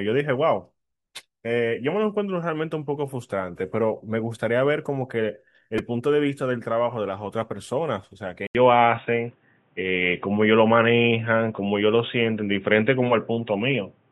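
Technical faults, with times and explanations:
5.78 s, repeated buffer: a tiny chunk, about 2.9 ms long (which fits a 128-sample buffer), gets played four extra times because fresh audio didn't arrive in time. With pieces that short, it comes across as a quick buzzy click, with essentially nothing lost.
8.47 s to the end, input switched to a poorer device: after an 80 ms gap the sound goes dull, with nothing above 3.8 kHz, a level shift of about 5 dB and a new noise floor roughly 45 dB down. That's likely a change to a lesser microphone or a headset's call profile.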